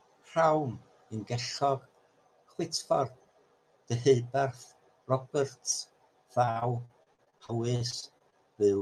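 From 6.45 to 8.34 s the speech suffers repeated packet loss, giving a robotic sound. Seventeen short dropouts occur, the longest 44 ms. Each is covered by stretching the preceding sound, filling about a fifth of the stretch. It sounds choppy.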